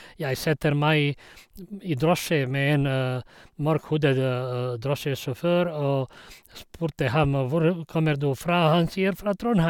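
Nothing in this speech recording registers as a technical fault: no dropouts, level jumps or other disturbances can be heard anywhere in the signal.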